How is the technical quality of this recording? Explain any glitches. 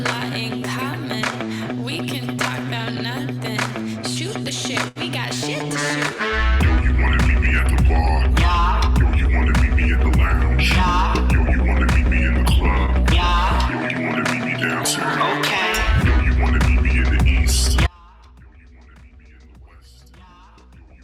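Two glitches stand out: a brief stall near the five-second mark and a dropout that runs from late in the recording to the end.

At 4.88 to 4.98 s there is a short stall from a late packet. A packet missed its playout time and the jitter buffer ran dry, so the receiver stretched the last bit of sound for about 73 ms until the packet turned up. Playback then resumed where it had stopped, about 73 ms behind its earlier timing. Nothing is lost. The sound is simply held too long, with a slight buzzy or dipped quality.

From 17.87 s to the end there is an audio dropout to a faint residue. The main signal cuts out abruptly, most likely because the source feeding the chain was lost while the path after the break stayed live. What remains is a faint sound roughly 30 dB below the normal level. It is not a pause or a fade. The audio drops suddenly to this low leak and never returns.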